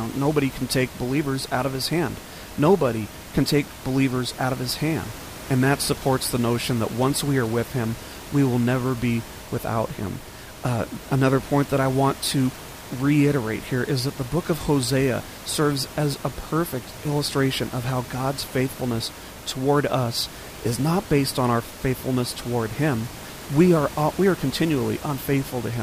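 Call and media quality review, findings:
Nothing to flag on this speech recording, just some room noise sitting about 16 dB under the talker, which belongs to the space rather than the system.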